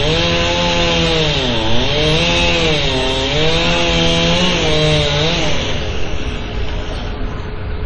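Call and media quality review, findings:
Dull, band-limited sound for the full clip: nothing above 11 kHz. Two distinct artefact textures are audible at once. Likely transcoding between lossy codecs: the character points to a low-rate WMA encode around 32 kbit/s re-encoded to MP3 around 48 kbit/s. The second encoder spends bits on the first encoder's debris and adds its own, and the lowest cut-off in the chain is kept.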